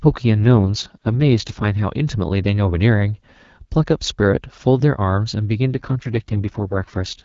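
From 0.44 to 1.80 s, and again from 5.72 s to the end at 7.24 s, the speech goes through an AMR rate drop. The codec steps down to a lower mode, which fits a fall from 12.65 to 6.6 kbit/s, so fewer bits describe the voice and it turns rough, raspy and synthetic. The AMR wideband codec is otherwise running at a clear rate. On a spectrogram the band edge stays put and the waveform shows no gap, but the harmonics smear and grow noisier.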